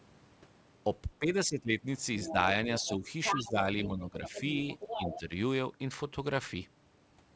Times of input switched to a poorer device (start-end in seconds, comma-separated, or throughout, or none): none